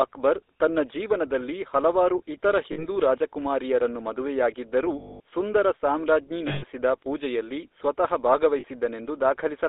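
From start to finish the speech carries the character of the GSM full-rate codec, and the damage is plainly audible. The audio is confined to a line band of roughly 300 Hz to 3.7 kHz, so it sounds thin and lacks the upper consonant detail. The codec rebuilds each stretch from a vocal-tract model driven by a sparse, regularly spaced pulse excitation, and that coarse excitation gives the voice a buzzy, gravelly roughness. The result is consistent with a 13 kbps GSM stream.

Lost GSM frames interrupt the speech four times: 2.72 to 2.86 s, 4.98 to 5.20 s, 6.48 to 6.64 s, and 8.60 to 8.65 s. The gaps last about 60, 220, 140 and 40 ms, which fits runs of 20 ms frames going missing. In each gap the decoder keeps reusing the last good frame's parameters. This turns the speech into a held, metallic ring. The 220 ms dropout at 4.98 s is the longest. The 40 ms loss at 8.60 s is only a brief rough ring.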